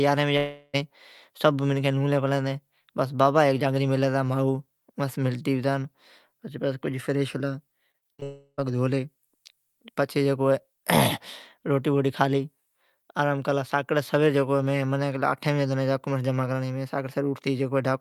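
A smeared buzz that fades into brief silence cuts into this speech recording twice, first from 0.37 to 0.75 s and again from 8.24 to 8.61 s. In each case the receiver stretches the last sound across the gap and then falls quiet for about 40 ms the first time and about 80 ms the second, before the speech resumes with roughly 0.36 s and 0.34 s of material gone. This is likely a long network dropout, where no audio arrived for the whole stretch. Just before the second dropout, from 7.91 to 8.24 s, the speech turns choppy. Five short holes, the longest 55 ms, remove about 0.2 s in total, and each hole is patched by repeating the preceding sound, so concealment covers over half of that span. That robotic texture is the signature of repeated packet loss, with packets dropping or arriving late again and again.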